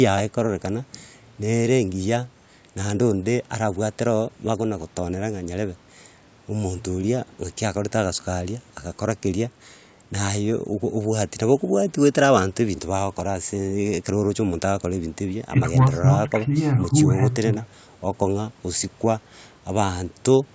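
Nothing technically wrong turns up in this speech recording, which simply carries the usual call microphone processing, with the lowest bass trimmed away and nothing above 8 kHz, exactly as that path normally leaves it.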